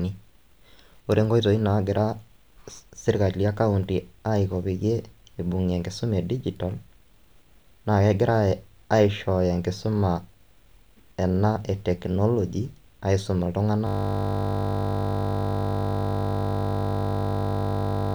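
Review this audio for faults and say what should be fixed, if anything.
A system hang loop begins at 13.87 s and lasts to the end of the clip. The speech stops and a single 20 ms slice of audio repeats over two hundred times, producing a steady buzz at 50 Hz. This happens when the computer or audio driver freezes while the sound hardware keeps replaying its ring buffer, which here fits a buffer about 20 ms long. To prevent it, run audio on a high-priority thread with a watchdog that mutes output when the buffer stops being refilled.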